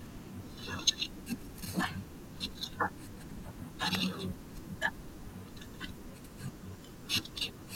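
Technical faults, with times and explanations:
3.95 s, electrical switching spike: a sharp snap, only a few milliseconds long, lands on top of the speech and peaks at about -15 dBFS. It has none of the shape of anything in the recording itself; it's just a brief burst of energy riding over it. The likely cause is a nearby switch, motor or static discharge arcing and getting picked up by the audio line as an instant spike.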